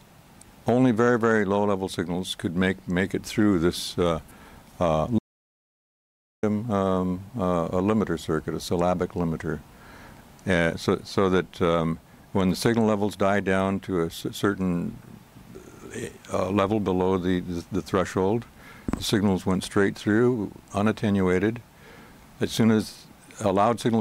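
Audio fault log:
5.19–6.43 s, audio dropout to silence: the input feed was likely lost for about 1.24 s, perhaps through a disconnected device, a failed link or an accidental mute, while the recorder kept writing silence. The sound cuts off abruptly in mid-flow and returns just as suddenly, with a gap of dead digital silence between. No room tone or background hiss survives inside it, and whatever occurred during that stretch is missing from the recording.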